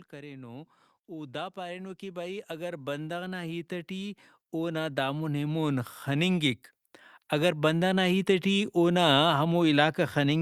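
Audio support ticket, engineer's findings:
Level swells upward twice, voice and background room sound together: slow rise 0.1 to 6.65 s, about 15 dB, then a shorter lift 7.29 to 8.75 s, about 3 dB. Automatic gain rising: AGC judged input too quiet and ramped gain gradually.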